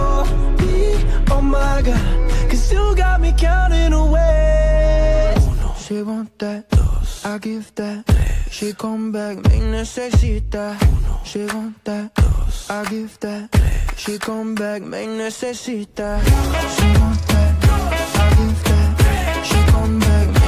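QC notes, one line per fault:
No fault found, so there are no QC notes for this clip.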